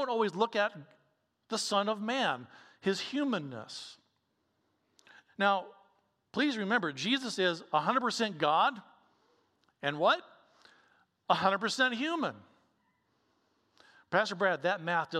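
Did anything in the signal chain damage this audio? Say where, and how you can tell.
No, nothing along the chain seems to have damaged this speech, so there's no stage to point to.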